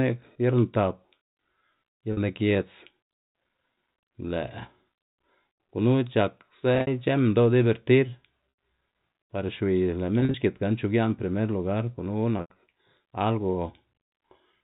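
Packet loss with pitch repetition at 2.13 s (40 ms, just before "lni giedz"), 6.75 s (scattered over 120 ms), 8.5 s (80 ms), 10.2 s (scattered over 140 ms) and 12.38 s (scattered over 200 ms, with a 90 ms run). At each gap the receiver loops the last pitch period, so the sound holds as a buzzy tone and fades toward silence on the longer runs, rather than breaking off abruptly as a plain dropout would.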